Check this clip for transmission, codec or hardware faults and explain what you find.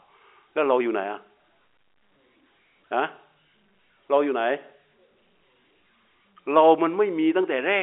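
No transmission, codec or hardware faults turn up in this speech clip, which carries the narrow band of a G.711 telephone line with nothing above 3.8 kHz.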